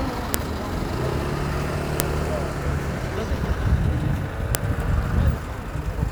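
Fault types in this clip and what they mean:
File header played as audio: sharp snaps at 0.34, 2.00 and 4.55 s, where joined WAV pieces kept their header bytes, which then played as samples.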